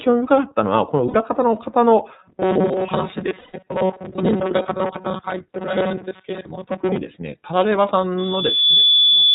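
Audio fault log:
throughout, iLBC codec: Each frame's excitation is coded on its own in a narrowband scheme, with a 30 ms frame size the grain suggests, so nothing above 4 kHz survives. The speech sounds band-limited, slightly rough and synthetic, and the coding damage is plainly audible.
1.08–1.15 and 3.38–3.55, lost iLBC frames: Packets went missing, about 60 ms and then 150 ms of audio, and the decoder filled each gap by repeating the last pitch cycle blended with noise. Each gap becomes a held, buzzy vowel, and the sound recovers immediately because frames decode independently.
2.23–6.97, robotic sound from repeated short buffers: The likely cause is fresh audio arriving too rarely, so playback loops a very short buffer while most real audio is skipped. The repetition imposes a fixed 188 Hz buzz, which fits a buffer of about 5.3 ms, turning the sound metallic and rigid.
8.18–9.35, loudspeaker feedback squeal: A microphone is picking up the loudspeaker it feeds, and the loop gain exceeds one at 3.4 kHz. 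A single tone swells over roughly 0.7 s into a squeal about 10 dB above the signal and continues to the end.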